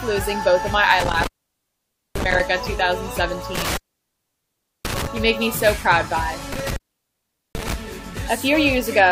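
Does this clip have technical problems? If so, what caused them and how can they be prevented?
Yes. There is an intermittent contact: a loose cable or plug in the signal chain briefly breaks the connection three times, between 1.0 and 2.41 s, 3.55 and 5.07 s, and 6.52 and 7.74 s. Each time the line goes open for about 0.89 s, 1.08 s and 0.79 s respectively, and the sound drops out, with crackle as the contact scrapes open and closed and faint hiss while it stays disconnected. Reseating and securing all connectors, with strain relief on the cables, and replacing any worn lead would prevent it.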